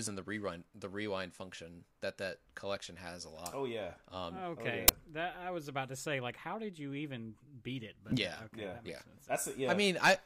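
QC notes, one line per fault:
4.88 s, file tags played as audio: a brief, hard-edged burst of very loud white noise right before "that I was about", from embedded cover-picture data being read as samples.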